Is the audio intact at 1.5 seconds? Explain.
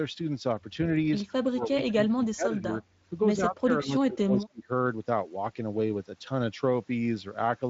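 No. From 1.5 to 2.81 s the speech dips and breaks up, down about 25 dB, likely speech suppressed in double talk as an echo canceller ducked both sides.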